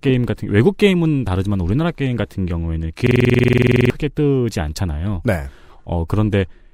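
A speech clip with a system hang loop from 3.07 to 3.90 s. During that stretch a single 46 ms fragment repeats exactly, about 18 times, giving a rattling stutter at roughly 21.5 Hz, which fits a 2048-sample buffer. The computer or driver froze while the hardware kept replaying its ring buffer, and about 0.7 s of speech is lost. On a waveform the section shows identical repeating blocks; on a spectrogram, evenly spaced vertical striations with a frozen spectral pattern.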